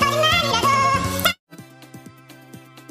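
Throughout, the sound plays at twice its proper speed and an octave high, the signature of audio read two samples at a time (double speed): pairs of samples are taken as one frame. Unlike a plain rate mismatch, any strong content above a quarter of the sample rate folds back.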